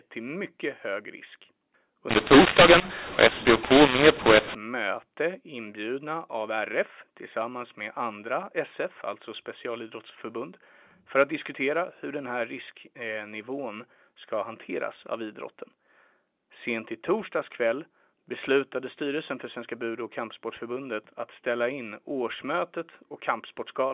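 A speech recording carried over G.711 telephone coding with mu-law, and from 2.09 to 4.55 s the mu-law and A-law were mixed up: bytes written with the mu-law curve were decoded as A-law. Because the two logarithmic scales map codes to different amplitudes, levels in that span are scrambled, with some samples too loud and others too quiet, and the quietest samples are pushed well above silence, so the speech distorts and gaps fill with noise. Throughout the clip, the 8,000-per-second telephone coding leaves nothing above 4 kHz.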